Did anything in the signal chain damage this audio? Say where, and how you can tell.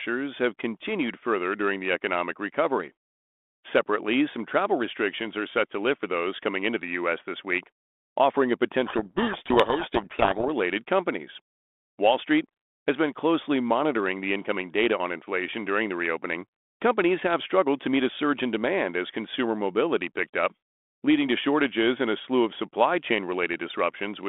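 Yes, at the codec stage: a codec payload misread from 8.86 to 10.49 s, after "this week offering a". Reversed G.726 bit order buries speech in harsh distortion, which shows as broadband hash on a spectrogram.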